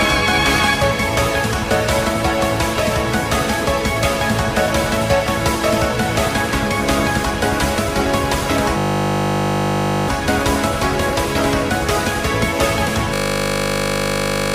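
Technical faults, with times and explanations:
8.78–10.08 s and 13.14–14.54 s, system hang loop: a 20 ms slice repeats exactly, 65 then 70 times, as the hardware cycles its buffer during a freeze. This gives a steady 50 Hz buzz rather than a dropout's silence, losing about a second and a half each time.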